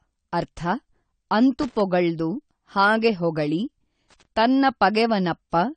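The whole speech clip sounds dull and smeared, with a warble on sibilants and nothing above 9 kHz. That's likely AAC compression, AAC-LC starved of bits and chopping off the top band, which fits a low bitrate around 32 kbps.

From 1.60 to 1.80 s there's a short, irregular burst of loose connector crackle, the scratchy sound of a worn contact rapidly making and breaking. It comes back from 4.10 to 4.25 s, right after "ಹಾಗೆ ಹೊಗಳಿ", chopping the signal again.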